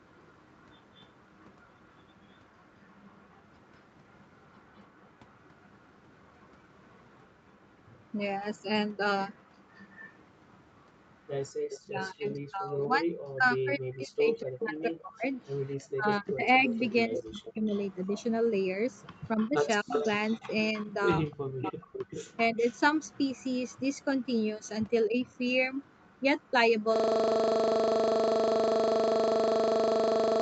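It's a speech recording with three problems. First, an echo leak: a very faint copy of the voice trails about 211 ms behind from the start to 12.4 s. From 14.61 to 26.83 s a much more noticeable copy returns about 298 ms late, most likely a far-end loudspeaker getting past that side's echo canceller. Next, the speech is suppressed in double talk, probably because the canceller ducked everything while both sides spoke. The voice drops out deeply, in pieces, between 11.81 and 17.69 s, again at 19.36–19.93 s and 21.28–22.58 s, with a barely audible dip at 25.07–25.17 s. Finally, a system hang loop takes over from 26.96 s to the end. A 40 ms slice of audio repeats exactly, giving a steady 25 Hz buzz, which points to the machine freezing while the audio hardware kept cycling its buffer.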